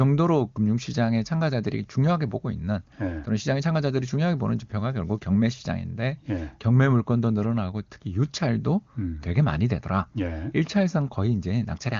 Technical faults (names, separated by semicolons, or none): none